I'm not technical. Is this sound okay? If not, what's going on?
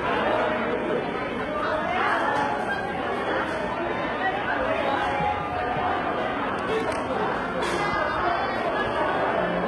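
No. From start to finish the sound has a rough, artificial top end, most likely from HE-AAC compression, a format built for very small files. It stores only the lower part of the sound properly and fakes the treble by copying lower material upward. Here the damage is heavy: the upper range sounds gritty and metallic instead of natural, and nothing at all comes through above about 11.7 kHz, so the finest sparkle is missing.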